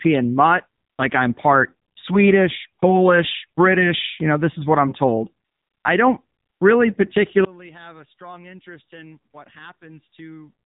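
The speech passed through an AMR narrowband mobile codec for its whole length, so it was reduced to 8 kHz sampling and rebuilt from a vocal-tract model excited by a few pulses per 5 ms subframe. Nothing above 3.8 kHz survives, which leaves the voice thin and boxy. The plainly audible buzzy, synthetic coloring fits a mid-rate AMR-NB mode, around 8 kbps, where too few bits remain to capture natural detail.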